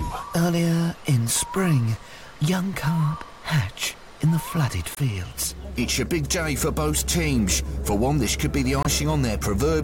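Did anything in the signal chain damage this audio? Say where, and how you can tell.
Yes. Corrupt frame muted at 4.95–4.98 s and 8.83–8.87 s, at the codec decoding stage. The sound cuts abruptly to silence for about 36 and 42 ms, each gap fitting one compressed frame. Bit errors made the decoder reject it, and playback filled silence without shifting timing.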